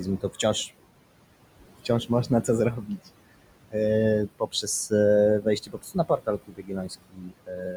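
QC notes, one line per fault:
Throughout: noise suppressor artifacts. Steady background, about 15 dB under the speech, is pulled down by about 21 dB between phrases, so the noise sinks between the words and rises under them.
2.08–2.49 s, 2.83–3.08 s, 4.27–4.67 s, 5.41–6.92 s, 7.10 s to end: speech cut by the noise suppressor. Quiet speech misread as noise is dipped by about 11 to 21 dB, deepest late on, leaving the affected speech faint or swallowed.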